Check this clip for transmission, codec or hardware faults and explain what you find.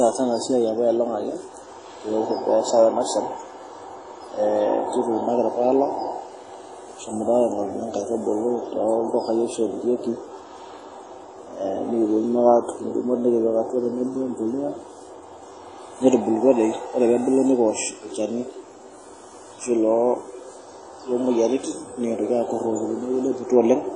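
One fault runs through the whole speech clip: it is likely WMA compression. Nothing survives above 10.1 kHz, and long transform blocks smear coarse quantisation noise across tens of milliseconds, fitting a bitrate around 32 kbps. It sounds plainly ringing and washy, with hiss breathing alongside the speech. A spectrogram shows a hard ceiling at 10.1 kHz and patchy, speckled gaps where weak components were zeroed.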